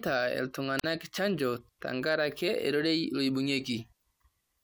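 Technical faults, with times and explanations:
0.78–0.84 s, wireless microphone squelch dropout: the radio link from the analogue FM microphone weakens, so broadband hiss briefly swells before the receiver's squelch cuts the output for about 42 ms, leaving a near-silent hole in the speech before it returns. On a spectrogram this appears as a short vertical smear of noise across all frequencies followed by a blank column. The waveform shows a fuzzy burst, then an almost flat line.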